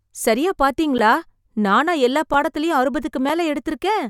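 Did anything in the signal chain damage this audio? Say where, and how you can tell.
Yes, at the driver or buffer stage: three blocks of digital silence, heard as ticks, at 0.98 s, at 2.34 s just after "நானா எல்லா", and at 3.29 s just after "நானா எல்லா பாடத்திலயும்". The first lasts 10.7 ms, fitting a 512-sample buffer; the others last 5.3 ms, fitting 256 samples. The waveform drops to a flat line with hard edges. A spectrogram shows an empty slot between thin broadband stripes. Zeros likely went out because the buffer wasn't filled in time.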